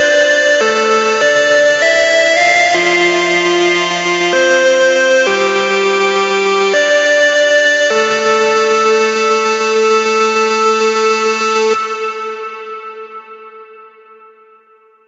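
Nothing's wrong with this recording of sounds, which has simply passed through a normal call chain, so the top end stops around 8 kHz as you'd expect from the codec's bandwidth.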